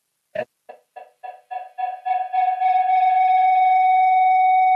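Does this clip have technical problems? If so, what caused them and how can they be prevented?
Yes. From 0.69 s to the end at 4.75 s, a tone of about 700 Hz swells over the speech and pulses roughly every third of a second, peaking about 8 dB louder than the talker. This is feedback howl: two devices on the same call in one room pass sound from loudspeaker to microphone and back, gaining level each cycle and narrowing onto the frequency the loop favours. Joining from only one device, or muting the second device's microphone and speaker, prevents it.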